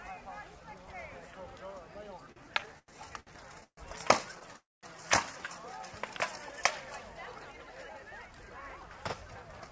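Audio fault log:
2.32–3.79 s, repeated stalls (stutter): The sound halts seven times, the longest for 135 ms. Each halt stretches the last sound to fill the wait. About 374 ms is filled, a quarter of the span. Nothing is lost, but the audio drags and stutters.
4.56–4.85 s, call audio freeze: The sound hangs for about 0.27 s. The last sound carries on, fades, then about 0.21 s is silent. It resumes exactly where it stopped. Packets were likely held up, draining the jitter buffer, so a gap was inserted.
7.39–9.68 s, jitter buffer speed-up: The audio plays at 110% speed with unchanged pitch and sounds hurried. The receiver trimmed many short pitch-period slices, around a third of a second in total, to shed excess buffered delay after a backlog.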